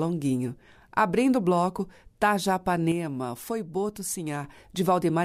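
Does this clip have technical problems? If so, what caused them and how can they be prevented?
Yes. From 2.92 s to 4.44 s the speech suddenly drops by about 6 dB, then returns to full level. The likely cause is one channel dropping out. One side of the stereo signal was lost for that stretch. When the two sides were summed to mono, the sound common to both fell by half. Anything carried only on the lost side vanished. Check cables, connectors and channel routing before recording, and monitor both channels throughout.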